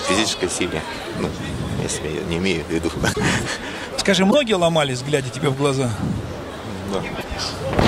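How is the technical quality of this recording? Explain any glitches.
Three brief glitches interrupt the recording, at 3.12 to 3.17 s, 4.30 to 4.34 s and 7.20 to 7.24 s. Each lasts about 44 ms, not quite two 26.1 ms MP3 frames. The sound skips forward at each point. The likely cause is a broken MP3 bit reservoir: after frames went missing, the next frames fetched borrowed data from the wrong bytes. A waveform would show a discontinuity at each time.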